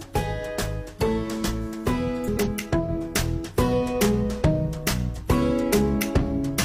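Between 2.24 and 2.48 s the sound briefly turns into a garbled flutter, after which everything carries on in time. This is frames out of order: two adjacent runs of coded frames, each about 93 ms long (which fits two-frame blocks), were decoded in swapped order, so the halves of that quarter-second play back-to-front relative to each other without losing any duration.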